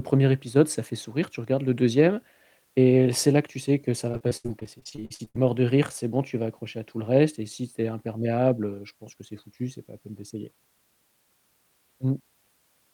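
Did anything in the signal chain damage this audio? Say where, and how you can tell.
Yes, the network stage did. From 4.11 to 5.36 s, right after "tu sais que ça", the speech turns choppy and robotic, which is repeated packet loss. The gaps come thick and fast, the longest about 73 ms, each patched by stretching the last bit of sound, until "es mort de rire".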